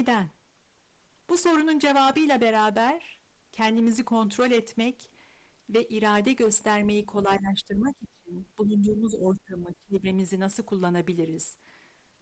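From 7.38 to 8.38 s and again from 8.56 to 10.07 s, the talker is pulled down by about 20 to 25 dB. This is likely speech suppressed in double talk, where the echo canceller ducked the near voice while the far side spoke. Between 8.9 and 8.97 s, inside that second dip, a short, faint scrap sits about 20 dB under the speech. It is likely the other side's voice leaking through as residual loudspeaker echo.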